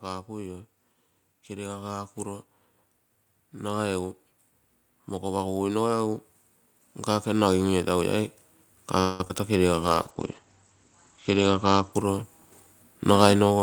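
Speech that swells gently in level from 7.06 to 8.4 s, the voice and the background rising together by about 3 dB over more than a second. That smooth, shared lift is the signature of automatic gain rising: the gain control judged the input too quiet and raised its gain step by step, so everything in the signal was lifted at once rather than the talker simply speaking louder. From 9.00 to 9.36 s the sound turns choppy, with a robotic buzz and small pieces dropping out. This is repeated packet loss (robotic sound): holes arrived in quick succession, and the receiver patched each by stretching the last bit of sound, so about two-thirds of that short span is synthetic fill, the longest patch lasting 192 ms, with around 40 ms left simply missing. From 9.86 s to 13.57 s the voice goes rough and muffled, its top end gone. That is a call bitrate drop: the bandwidth estimate fell and the encoder coded far more coarsely, in a way that fits a fall from 64 to 16 kbps, while the audio band shrank from 20 kHz to 8 kHz, with the worst stretch lasting 1.46 s. 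Overlapping its end, from 13.02 to 13.60 s, the speech sounds hurried at unchanged pitch, running at 112% speed. This is a jitter buffer speed-up: with too much audio queued, the receiver cut out short pitch-period slices one after another, somewhere around 70 ms in total, to bring the delay back down.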